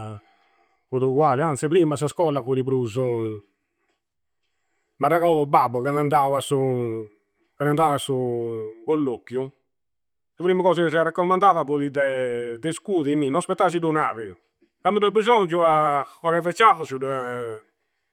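No technical faults are audible.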